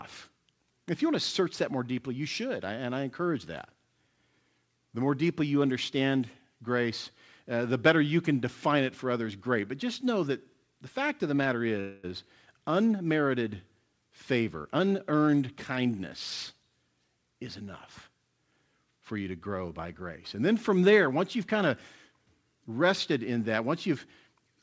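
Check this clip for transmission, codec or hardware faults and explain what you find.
Two faults stand out.

From 11.80 to 12.05 s, a call audio freeze: packets likely stalled and the jitter buffer emptied, so about 0.23 s of fading buzz fills the gap before the speech resumes intact.

From 14.65 to 16.00 s, a jitter buffer speed-up: the overfull buffer trims repeated pitch-period slices, about a fifth of a second in total, so the speech runs 116% fast and sounds hurried at unchanged pitch.

The call path's codec leaves nothing above 8 kHz, which fits wideband G.722.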